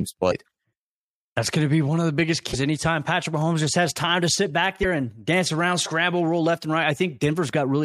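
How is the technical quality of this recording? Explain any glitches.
The recording has three short glitches. At 0.30 to 0.33 s, at 2.52 to 2.55 s after "one of the biggest", and at 4.82 to 4.85 s between "time to sit back" and "and dance around scramble", the speech jumps ahead with a brief chirp or hole. Each lasts about one 26 ms MP3 frame. The likely cause is a broken MP3 bit reservoir: frames went missing, so the next frame read borrowed bytes from the wrong data.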